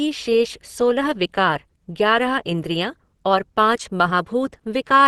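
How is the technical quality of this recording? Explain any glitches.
The recording is compromised by audible codec damage that runs through the whole speech clip. It sounds like Opus compression, likely at a low rate near 16 kbps. At that rate the encoder works in its hybrid speech mode. It codes the lower band as speech and fills the upper band by folding lower bands or with noise. The result is plainly audible. The speech sounds muffled and hoarse, with a rough, grainy texture where detail should be.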